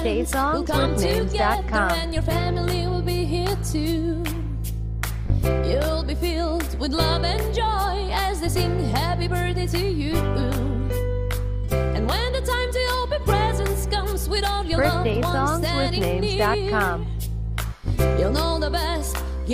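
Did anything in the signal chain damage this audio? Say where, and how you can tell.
No, nothing along the signal chain has left an audible mark on this audio, which is continuous throughout with no stage introducing damage.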